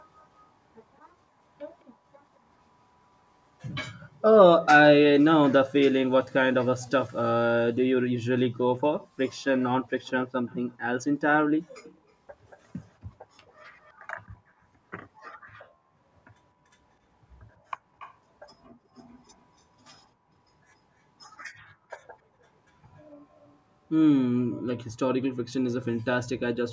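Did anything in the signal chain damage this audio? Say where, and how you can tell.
Yes, at the call-processing stage: echo leak at 10.05, 11.82, 13.47, 17.99 and 23.37 s. Faint copies of the speech return 223 to 282 ms late, about 25 to 35 dB down. They sound like distinct delayed repeats rather than smeared room reverb, likely from incomplete echo cancellation.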